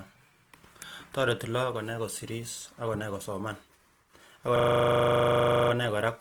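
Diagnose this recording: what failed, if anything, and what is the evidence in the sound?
At the codec stage, the speech sounds grainy and rough throughout, with the top end intact, which points to likely Opus compression in its music mode at a low rate around 24 kbps.

At the driver or buffer stage, from 4.56 to 5.72 s a 40 ms slice repeats as a 25 Hz buzzing stutter: a system hang loop, the hardware recycling one buffer while the driver froze.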